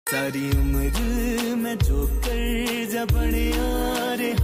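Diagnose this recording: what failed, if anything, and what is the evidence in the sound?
Nothing stood out on listening that would point to a failure at any stage of the chain.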